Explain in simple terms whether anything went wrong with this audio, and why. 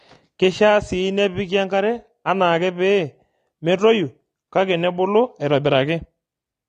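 The speech sounds dull and muffled from start to finish, as if heard through a thin cloth, with a watery, warbling fizz on hissy sounds and held vowels. Nothing can be heard above about 9.7 kHz, so the crisp top end is simply gone. The likely cause is AAC compression: the file was squeezed hard to save space, and the encoder threw away the highest frequencies and roughly approximated the rest.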